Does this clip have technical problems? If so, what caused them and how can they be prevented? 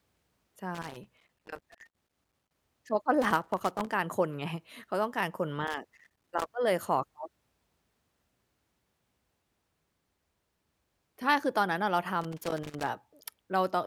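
Yes. The speech is broken by loose connector crackle in four bursts, at 0.75 to 2.55 s, 3.22 to 3.92 s, 5.67 to 6.46 s and 12.22 to 12.89 s. Each burst is an irregular scratching crackle. A worn or dirty contact is making and breaking as it shifts. That chops the signal on and off. Prevention is simple: clean or replace the plug and cable, and secure it against movement.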